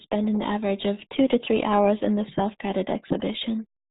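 From start to finish the speech runs through the RealAudio 14.4 codec, and the damage is heavy. Nothing gets through above about 3.8 kHz, so it's muffled, with that gargly, smeared texture that fits an old 8 kbit/s dial-up speech coder.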